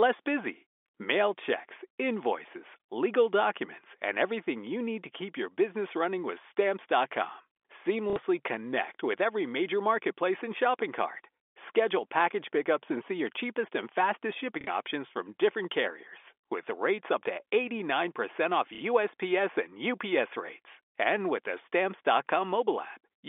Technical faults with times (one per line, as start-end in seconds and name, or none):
8.10-8.16 packet loss with last packet repeated
14.61-14.67 packet loss with last packet repeated
18.75-18.81 packet loss with last packet repeated